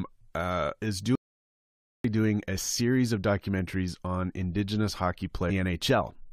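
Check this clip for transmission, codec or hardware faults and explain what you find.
Two faults show up in this speech clip.

At 1.15 s, right after "uh is", there's an audio dropout to silence lasting about 0.89 s until 2.04 s, picking up at "doing a series of". The gap is silent with no room tone, so the input likely dropped out while the recorder kept writing silence. Whatever was said there is gone.

From 5.49 to 5.51 s there's a short glitch from damaged data in a compressed stream. Some bytes got corrupted, so the decoder misread those frames, lost sync and searched for the next valid header.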